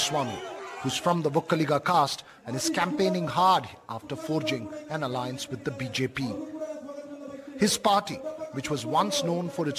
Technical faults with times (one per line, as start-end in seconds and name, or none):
none